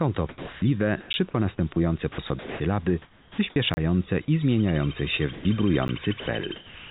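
Sound chopped by the voice detector runs from 0.29 to 3.56 s. Over this stretch the sender likely switched transmission on and off repeatedly, and about 1.2 s in total was swapped for synthetic comfort noise. The sound turns choppy.

A block of digital silence appears at 1.13 s, another from 3.74 to 3.77 s, and a third at 5.88 s. Each time the output dropped to silence without any fade, so the 10 ms gaps at 1.13 and 5.88 s come across as ticks, while the 30 ms gap at 3.74 s is a short hole.

Sound dropped by the voice detector occurs from 5.33 to 5.45 s and again from 6.20 to 6.26 s. The detector likely mistook quieter sound for background and stopped sending, so 120 ms and then 60 ms of real sound are replaced by steady noise until transmission resumes.

Comfort noise in place of the background starts at 6.20 s and lasts to the end. Once sending paused, the receiver likely generated synthetic noise in its place, covering about 410 ms. 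The textured real background gives way to a flat, featureless hiss, all within the call path's band, which stops near 4 kHz and fits 64 kbps G.711 A-law.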